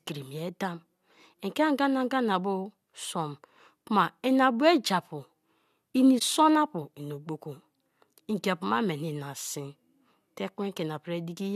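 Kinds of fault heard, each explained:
Corrupt frame concealed: Around 6.18 to 6.22 s there's a short concealed stretch in the speech, about 34 ms long, which fits two damaged compressed frames. The decoder caught that the bits in those frames had been flipped and papered over them itself rather than playing garbage.
Corrupt frame decoded: At about 7.55 s there's a tiny glitch, faint at roughly 50 dB below full scale, lasting only a couple of frames' worth. Here the flipped bits slipped past the decoder, which played the damaged frames as if they were fine. Misread gains and codes pushed energy into the wrong frequencies, so instead of a smooth gap you get a brief stray sound that doesn't belong to the speech.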